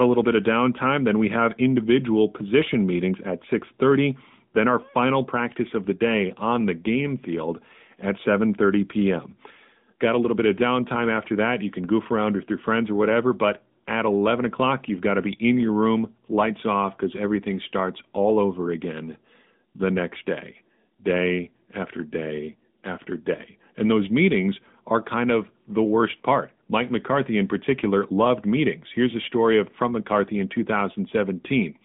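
From start to finish the speech carries the sound of the AMR narrowband mobile codec. The voice is squeezed into a telephone band of roughly 150 Hz to 3.6 kHz, and nothing at all survives above 3.7 kHz. The codec rebuilds the voice from a vocal-tract model driven by sparse pulses in 20 ms frames. This gives a plainly audible buzzy, synthetic edge, which fits a mid-rate mode near 10.2 kbps. A spectrogram shows a flat ceiling with empty space above 3.7 kHz and a thinned floor below 150 Hz.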